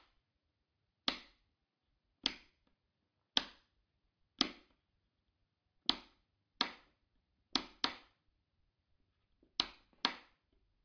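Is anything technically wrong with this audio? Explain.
No, nothing is technically wrong with this audio.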